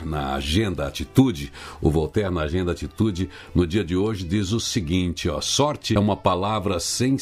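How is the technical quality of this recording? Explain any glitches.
One glitch stands out, at about 5.95 s: a very brief burst caused by damaged data in the compressed stream. Some of the encoded bytes at that point were wrong, so the decoder misread the affected frame, lost its sync and had to hunt for the next valid frame header before resuming. The result is a tiny chirp or blip lasting roughly 12 ms. On a spectrogram it shows as a thin vertical smear of broadband energy unrelated to the surrounding content, and on the waveform as a short, abrupt disturbance with discontinuities at both edges.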